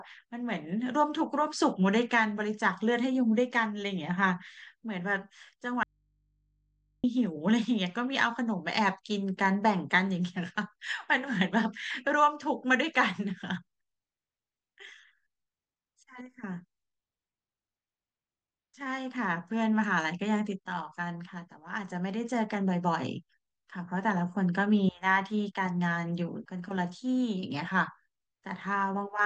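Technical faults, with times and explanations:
5.83–7.04 s, audio dropout to a faint residue: the speech cuts out abruptly for about 1.2 seconds and leaves only a low mains hum, sitting roughly 45 dB below the normal level, before the signal snaps back in mid-flow. Unlike a natural pause or fade, the edges are sudden. The likely cause is a brief loss of the wanted signal at the input while the path downstream stayed live, so the open input's hum carried through the gap.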